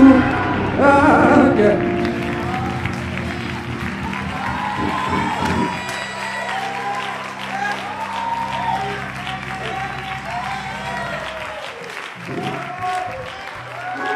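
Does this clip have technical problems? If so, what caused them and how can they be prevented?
Yes. From 0.0 to 2.0 s the sound is dull and muffled, the result of de-emphasis applied wrongly: a treble-cut curve meant to reverse pre-emphasis was applied to material that either had none or had already been corrected. The response slopes smoothly downward, sitting about 10 dB lower at 10 kHz than at 1 kHz. On a spectrogram, the upper bands in those first two seconds look visibly faded, with energy tapering gradually rather than stopping at a hard edge. The waveform looks smoother, with less fine detail. To prevent it, check whether the source actually carries pre-emphasis and make sure exactly one de-emphasis stage is active in the chain.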